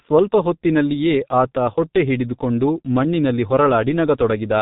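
From start to finish, the speech carries G.723.1 codec damage, and it is heavy. Nothing above 3.8 kHz survives, so the sound is dull and muffled. The codec rebuilds the voice from a coarse model updated only once per 30 ms frame. Fine detail between updates is lost. The result is a hoarse tone with smeared consonants. The sparse detail points to a bitrate near 6.3 kbit/s.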